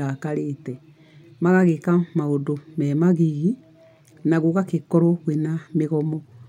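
Speech recording, no technical faults audible anywhere in the clip.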